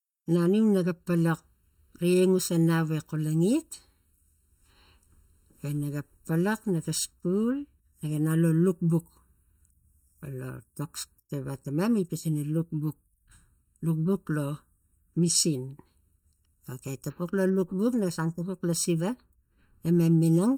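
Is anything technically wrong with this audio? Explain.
Yes. Channel delay (comb filtering) runs throughout the speech. One channel arrives roughly 0.7 ms late, and summing to mono cancels shared content at evenly spaced frequencies, starting near 700 Hz and repeating at even intervals. The voice sounds hollow and phasey, with fixed spectral notches.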